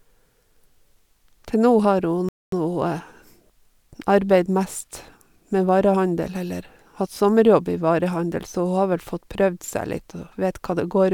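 At 2.29 s a rebuffering stall occurs: playback runs out of downloaded audio and halts until more data arrives. The speech drops to silence until 2.53 s, then resumes exactly where it stopped, with nothing missing but about 0.24 s of dead air inserted.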